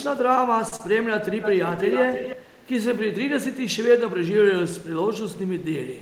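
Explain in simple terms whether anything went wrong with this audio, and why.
A short stall from a late packet happens at 0.68 to 0.73 s. One piece of the call arrived late, so the receiver held the last sound for about 35 ms until it showed up. Nothing is lost, but that moment drags slightly.

Short concealed packet loss follows at 0.76 to 0.80 s. About 30 ms of audio never arrived, so the receiver invented a stand-in by carrying the previous sound forward and then blending back. That leaves a brief smear where the real sound should be.

An echo leak runs from 1.41 to 2.67 s. A second copy of the speech trails the original by about 0.31 s, fairly loud compared with the speech. The likely cause is that the other side's loudspeaker was picked up by its microphone and not fully cancelled.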